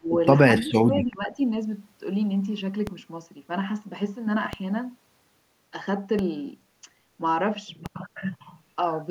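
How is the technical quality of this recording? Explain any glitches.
The recording has two kinds of glitch: speech suppressed in double talk near the start, and four DC steps later on.

From 0 to 0.1 s, and again from 0.58 to 1.38 s, the speech dips sharply. The deepest drop is roughly 30 dB and 20 dB. This is likely an echo canceller ducking the talker while the far side spoke.

At 2.87, 4.53, 6.19 and 7.86 s, the waveform's zero line jumps. Each DC step gives a low thump. A 5 Hz high-pass then lets the offset decay.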